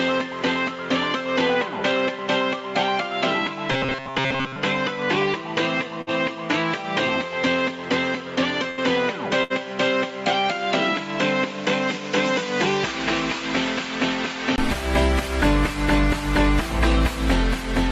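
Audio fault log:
0.0–14.58 s, input switched to a poorer device (likely): a narrower band, about 5 dB quieter, with its own faint noise floor, then a brief 20 ms gap before full band returns.
3.72–4.56 s, robotic sound from repeated short buffers (likely): a stiff metallic buzz at 134 Hz, from roughly 7.5 ms chunks replayed over most of the audio.
6.01 s, 8.71 s, 9.43 s, burst of packet loss: each time roughly 60 ms is lost, the last sound is held and faded for 53–68 ms, then playback jumps ahead.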